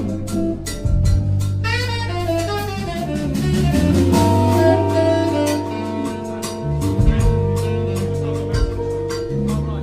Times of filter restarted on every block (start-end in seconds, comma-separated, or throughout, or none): none